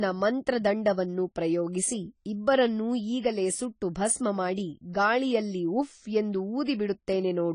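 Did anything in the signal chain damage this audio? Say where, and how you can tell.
Yes, at the codec stage. Across the whole speech clip there is AAC compression damage: nothing survives above 10 kHz, and the coding artefacts are plainly audible throughout rather than at particular moments. The damage most likely comes from AAC-LC at a low rate, consistent with about 24 kbps, which lowered the cut-off and starved the quantiser. A simple low-pass filter or narrowband stage would dull the top end but leave the remaining band clean, without the audible coding damage heard here.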